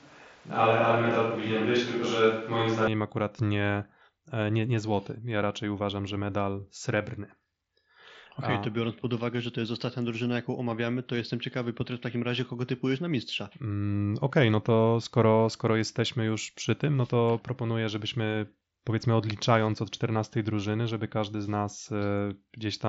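From the very start of the clip until about 2.87 s, the speech sounds roomy and hollow, with thin bass, before it snaps to a close, dry sound just ahead of "akurat nie e nie". This is a switch to a distant microphone, the likely cause being that the close microphone's signal was missing and a farther one stood in. On a spectrogram, that stretch shows smeared reverberant tails, weaker low frequencies and a room-noise floor about 30 dB below the speech, all ending abruptly at 2.87 s. The waveform level barely changes at the switch. The whole spectrogram stops at 7.7 kHz because of the Bluetooth mSBC headset codec.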